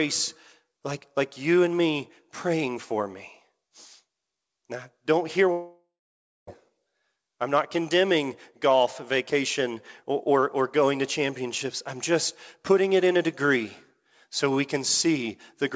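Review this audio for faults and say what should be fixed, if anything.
A long network dropout runs from 5.52 to 6.49 s, right after "don't hear". The last sound is stretched into a buzzy hiss that fades, followed by about 0.58 s of near silence. The audio then resumes with about 0.96 s of material gone. This is likely packet loss that emptied the receiver's jitter buffer, so concealment repeated the final frame and then muted. The missing stretch is not replayed. The surrounding audio stops at 8 kHz, which fits a G.722 call path at 64 kbps. To prevent this, stabilise the network link or add redundancy such as FEC, so that bursts of lost packets can be recovered.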